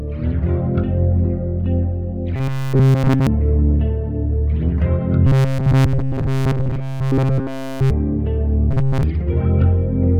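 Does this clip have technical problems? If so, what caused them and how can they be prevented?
Yes. Robotic sound from repeated short buffers appears at 2.36–3.27 s, 5.27–7.91 s and 8.71–9.03 s. Throughout, a rigid 133 Hz buzz replaces the sound, likely because a chunk of about 7.5 ms keeps looping while the real audio is skipped. A spectrogram shows evenly spaced harmonic lines at multiples of 133 Hz, and the waveform shows identical repeating cycles. Larger buffers and a higher-priority audio thread prevent this.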